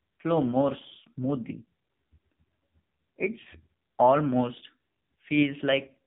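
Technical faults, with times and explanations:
Throughout, AMR narrowband mobile codec: nothing above 3.8 kHz survives, and heavy damage gives the speech a buzzy, synthetic edge, consistent with a low AMR-NB mode near 6.7 kbps. Unlike a simple low-pass filter, the voice itself sounds rebuilt from a sparse pulse-driven model.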